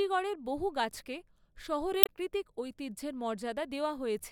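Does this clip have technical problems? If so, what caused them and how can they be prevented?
Yes. From 2.01 to 2.09 s, damaged data in a compressed stream makes the decoder misread corrupted frames and lose sync while hunting for the next valid header, producing a brief glitch. On a spectrogram this shows as an abrupt break in the speech. Checksummed storage and transfer, with error-checked framing in the stream, would prevent it.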